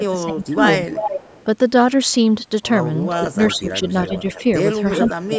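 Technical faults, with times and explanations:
0.00–0.59 s, speech suppressed in double talk: The voice dips by up to about 15 dB, for roughly half a second in all. Both ends were likely talking at once. The echo canceller could not separate the near voice from loudspeaker echo, so it turned both down.
0.67–1.44 s, echo leak: A delayed copy trails the voice by 378 ms. It sits only about 5 dB below the speech. The far end likely plays the call on a loudspeaker, and its canceller let that pickup back through.
3.33–4.44 s, speech suppressed in double talk: The voice drops by up to about 10 dB. About 0.3 s is affected in total. This is likely the canceller again ducking both sides while the other side speaks.
3.42–3.56 s, 4.07–4.42 s and 4.95–5.13 s, echo leak: Short scraps of the same 378 ms delayed copy come through. They sit about 15, 20 and 10 dB below the speech. The constant delay points to one loudspeaker path, likely with incomplete cancellation.
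5.15–5.38 s, speech suppressed in double talk: The voice drops by up to about 20 dB, the deepest cut heard. About 0.2 s is affected, running to the end. The likely cause is overlapping talk confusing the canceller.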